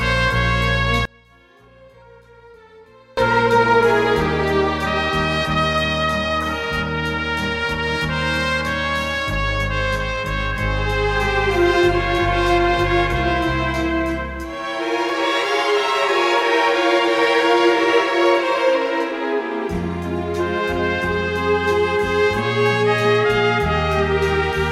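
From about 1.05 to 3.17 s the audio collapses to a faint residue, dropping by about 32 dB, which sounds like one channel inverted: with one side's polarity likely flipped, everything shared between left and right cancels in mono, leaving only the channel difference.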